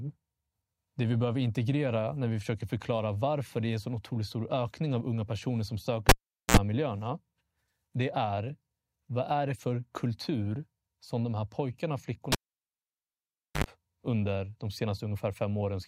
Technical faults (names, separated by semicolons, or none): cable pulled and plugged in